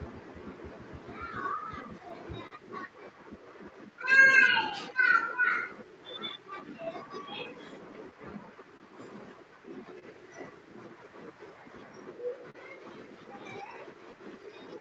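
Clock drift between sender and receiver runs through the whole speech clip. The sender's clock is slower than the receiver's, by roughly 3 percent. Audio arrives a little too slowly for playback. The jitter buffer keeps sinking toward empty, so the receiver has to stretch the sound to keep going. No single moment stands out. The whole clip sits slightly behind where it should be.

Repeated timing corrections follow from that drift. They run from 0.08 s to 14.75 s. The receiver keeps inserting short repeated pieces, always in the same direction. Playback speed settles near 98 percent. Around a fifth of a second is added in total. The edits are unevenly spaced. Each one is small. They come across as faint hiccups and a slightly dragging, unsteady tempo.

Scattered short gaps come in three bursts. From 1.83 s to 2.53 s there are about three, the longest around 40 ms. From 3.71 s to 6.88 s there are about five, each around 15 ms or less. 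From 8.11 s to 8.82 s there are about three, the longest around 30 ms. Packets were lost or late. The receiver filled each hole by continuing the last sound. Nothing is actually missing. The result is brief ticks and small smears.

A short stall from a late packet occurs at 9.99 s, and another at 12.50 s. Each time a packet missed its slot and the jitter buffer ran dry. The receiver held the last sound until the packet turned up, then carried on from the same point. The first hold lasts 28 ms and the second 42 ms. Each is heard as a sound held slightly too long. The call path carries nothing above 8 kHz.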